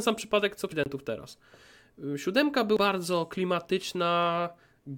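At 0.72 s compressed frames are skipped. Roughly five frames of about 93 ms each, around half a second of speech, are never decoded, so the speech jumps ahead. At 0.84 s a block of digital silence lasts 23 ms, which fits a 1024-sample buffer not filled in time. Unlike the skip, the speech drops abruptly to silence and returns abruptly. At 2.77 s another compressed-frame skip drops roughly two frames, about 200 ms, and the speech again jumps ahead.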